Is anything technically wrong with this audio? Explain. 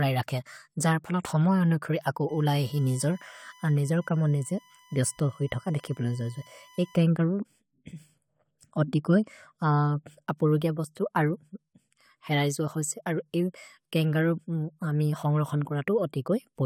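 Yes. From 2.29 to 7.02 s there is USB whine: current drawn by the USB bus in its 1 ms frames leaks into the audio path through power or ground. It sounds like a steady 1 kHz whine, roughly 30 dB below the speech, sitting underneath it.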